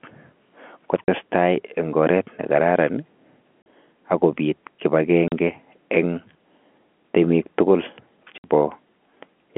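At 1.05, 3.63 and 5.28 s the speech drops out for about 40 ms, and at 8.38 s for about 60 ms. This is packet loss filled with silence: lost packets were replaced by silence, and the 40/60 ms gaps fit 20 ms packets. Each hole has hard edges. The waveform shows flat, squared-off gaps, and the spectrogram shows blank vertical strips inside the G.711 telephone band.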